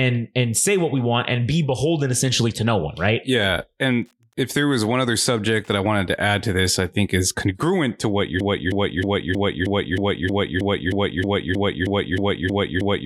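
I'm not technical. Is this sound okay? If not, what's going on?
No. There are two faults.

Wi-Fi interference runs from about 3.87 to 5.87 s, ending just before "to add to this". You hear a faint, steady ticking about ten times a second under the speech. A nearby Wi-Fi radio sends a short signal roughly every tenth of a second, and the audio circuit picks each one up and turns it into a small click. That regular beat is why it sounds like a ticking clock.

A broken-record loop starts at 8.40 s, right after "congruent to what you're", and lasts to the very end. A snippet about 0.31 s long plays 15 times back to back, so the same tiny piece of sound stutters on and on. This is likely because the player or stream stalled and kept resending the last piece it had. Whatever should have followed is missing.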